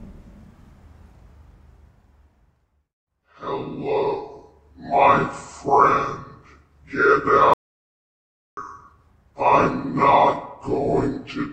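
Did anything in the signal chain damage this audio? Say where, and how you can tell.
Yes. An audio dropout to silence runs from 7.54 s to 8.57 s, losing about 1.04 s. The sound cuts off abruptly and resumes mid-flow, with silence and no room tone between. The input device or link likely dropped while the recorder kept writing silence.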